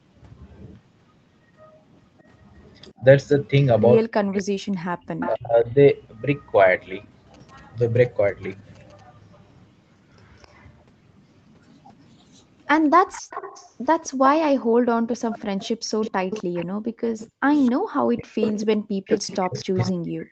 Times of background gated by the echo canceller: 14.64-17.80

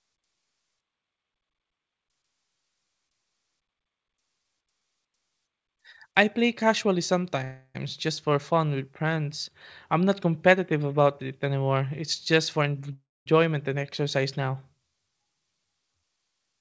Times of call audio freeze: 7.44-7.77, 12.93-13.29

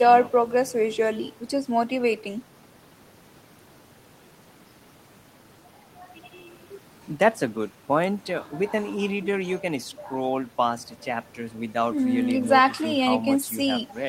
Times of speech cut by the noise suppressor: none

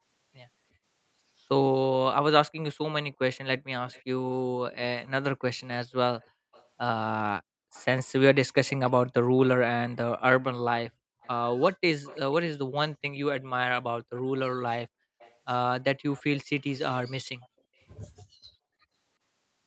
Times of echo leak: 3.92-4.04, 6.21-6.67, 7.73-8.91, 11.21-12.19, 13.39-14.22, 15.19-16.42, 17.41-17.84

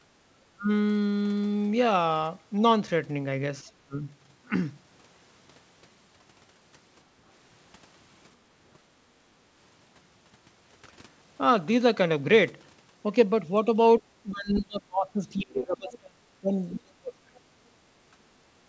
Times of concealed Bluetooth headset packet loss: none

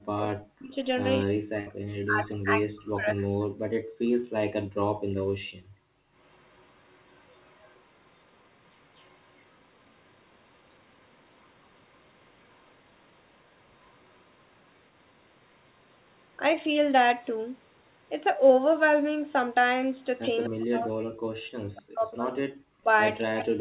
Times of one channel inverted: none

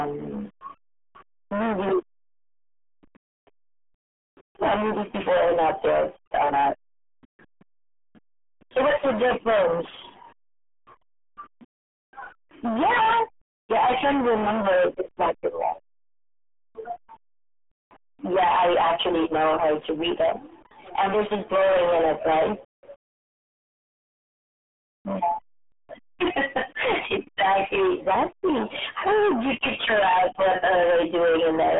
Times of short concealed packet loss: none

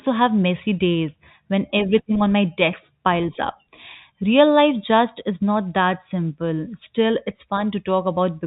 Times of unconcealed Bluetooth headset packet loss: none

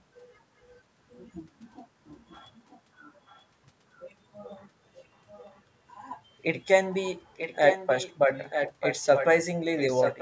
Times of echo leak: 2.15-3.44, 4.97-5.61, 6.92-8.16, 8.49-9.27, 9.77-10.22

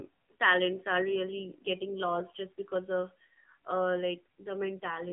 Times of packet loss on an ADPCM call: none

